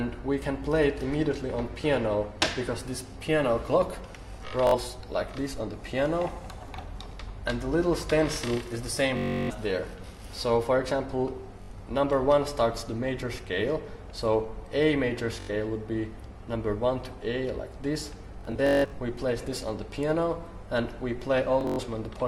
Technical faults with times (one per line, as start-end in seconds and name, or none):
4.67-4.75 Bluetooth stutter
9.17-9.51 Bluetooth stutter
11.63-11.70 Bluetooth stutter
15.40-15.50 Bluetooth stutter
18.41-18.98 Bluetooth stutter
21.61-21.80 Bluetooth stutter